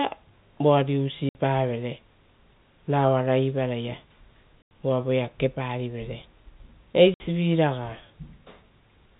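At 1.29 to 1.35 s, 4.62 to 4.71 s (just before "uva voea") and 7.14 to 7.20 s the speech drops out completely: packet loss filled with silence. Missing packets were replaced by nothing, leaving gaps of 60, 90 and 60 ms, which fits a 30 ms packet size. Each hole has hard edges. On a waveform these are flat silent stretches with abrupt edges. A spectrogram shows blank vertical bands, all capped at 4 kHz by the telephone-band G.711 coding.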